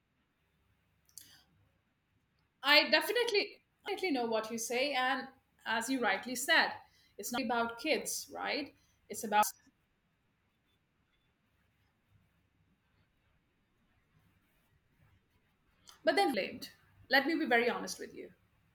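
Speech with damaged data in a compressed stream: brief glitches at 3.88 s (after "I definitely"), 7.38 s (after "you rightly said it's"), 9.43, 11.31 and 16.34 s, where the decoder misreads corrupt frames and resyncs.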